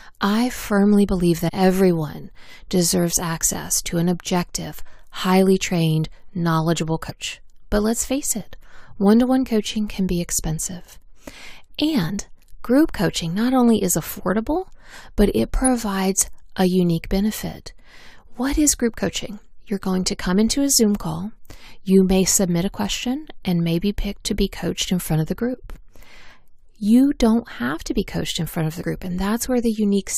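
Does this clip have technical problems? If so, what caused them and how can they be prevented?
Yes. Damaged data in a compressed stream causes brief glitches at 1.48–1.50, 7.09–7.11, 12.09–12.11, 15.65–15.67 and 28.81–28.83 s. Corrupted frames make the decoder lose sync and search for the next header. Checksummed transfer and verified storage prevent this.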